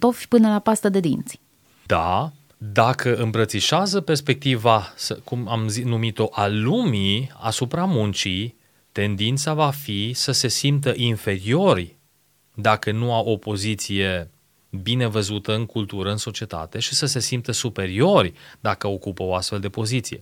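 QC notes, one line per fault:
Nothing to flag on this speech recording; I heard no problems anywhere in it.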